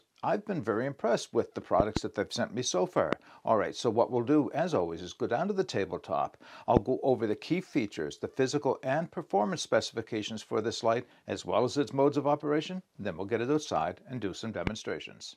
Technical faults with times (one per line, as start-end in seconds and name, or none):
1.80-1.99 loud pop
3.13-3.15 loud pop
6.77-6.79 loud pop
14.67-14.69 loud pop